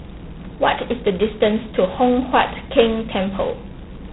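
A harsh, rasping hiss rides on the speech from start to finish, swelling as the talker gets louder and falling back in quieter stretches, and nothing comes through above about 3.9 kHz, so the sound is thin and boxy. This is heavy G.726 ADPCM damage. Each sample is sent as only a couple of bits describing its difference from a predicted value, and the coarse steps produce level-following noise that points to the 16 kbit/s rate.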